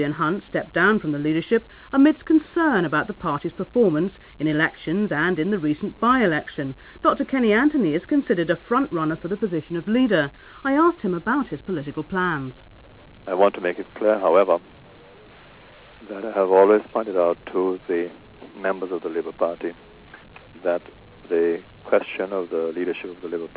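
No technical faults can be heard in this clip, which came through a G.711 A-law call path at 64 kbps that leaves nothing above 4 kHz.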